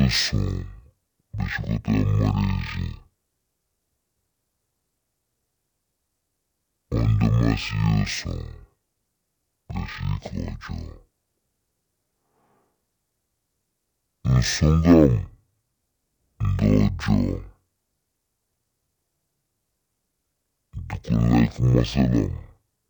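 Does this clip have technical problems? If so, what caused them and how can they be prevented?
Yes. Throughout, the speech plays at half speed and a full octave low, the signature of stereo read as mono. Interleaved left and right samples are treated as consecutive samples of one channel, doubling the duration. Prevention: set the decoder's channel count to match the file header.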